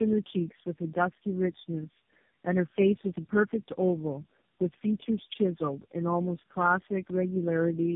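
Tandem speech coding runs through the whole recording. The speech was decoded and re-encoded at each network border, with about four separate speech coders in a row, each working on the previous one's damaged output. Nothing is present above 3.7 kHz, so the sound is muffled and narrowband, with a gritty roughness and a layered warble. That stacking sets it apart from a single low-bitrate codec, whose artefacts stay thinner and more uniform. The result fits a chain of narrowband coders such as AMR, G.729 and GSM.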